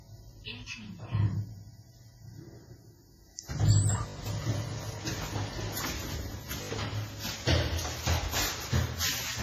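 From the first second the whole clip has a smeared, washy quality. Transients ring, there's a hiss that swells and shrinks with the sound itself, and nothing at all comes through above 15.1 kHz. That all points to WMA compression, likely an older WMA 1 encoder at a low bitrate, something around 24 kbps. Its long transform blocks spread quantisation noise over tens of milliseconds, and the weaker spectral detail gets thrown away entirely, so the damage is heavy.

At 6.62 s there's a quick stutter lasting until about 6.7 s. That's a repeated buffer: fresh audio didn't reach the device in time, so it replayed the last chunk four extra times, each with a hard join. The chunk length fits a 20 ms buffer, so it comes across as a short buzzy hiccup. Essentially no audio goes missing; playback just repeats in place and then carries on.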